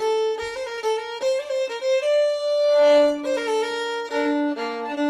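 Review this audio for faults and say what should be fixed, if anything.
At 0.69 to 0.73 s there is a short stall from a late packet. A packet arrived late and the jitter buffer ran dry. The receiver held the last sound for about 17 ms, then resumed where it left off. Nothing is lost, but the sound drags briefly and playback sits 17 ms later afterwards.

At 0.75 to 0.79 s there is short concealed packet loss. About 20 ms of audio never reached the decoder. The receiver filled the gap by extending the preceding sound, then blended back. It is heard as a brief smear or wobble.

A slightly deeper adaptive jitter buffer would absorb the late arrival, and forward error correction or redundant packets would recover the lost 20 ms instead of masking it.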